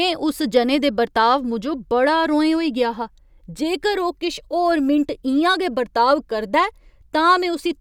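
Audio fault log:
No faults heard.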